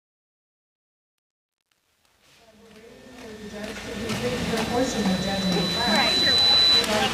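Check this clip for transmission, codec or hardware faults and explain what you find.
One fault stands out: truncation distortion on the fade-in, from 0.0 to 4.28 s, harshest up to about 3.26 s. The gain stage keeps too few bits without dither (the steps suggest roughly 10-bit resolution), so quiet passages collapse into coarse square steps, sounding gritty. Unlike dropouts or gating, the grit eases as the level rises toward the fade's end.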